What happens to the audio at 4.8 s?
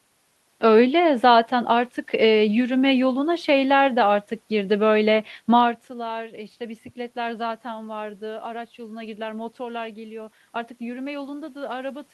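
At 4.8 s the speech carries on intact, with no dropout, glitch or distortion, only the room noise that runs beneath the recording.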